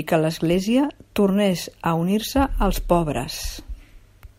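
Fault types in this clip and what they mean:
No technical faults can be heard in this speech recording. There is nothing here to list under any fault type.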